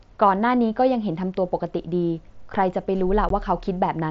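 At 3.29 s, unconcealed Bluetooth headset packet loss cuts a 15 ms hole in the speech, likely two dropped headset frames, heard as a short gap with abrupt edges. On the waveform it appears as a flat, sharp-edged gap.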